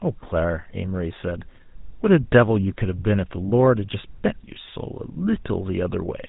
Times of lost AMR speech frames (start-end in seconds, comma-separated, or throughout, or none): none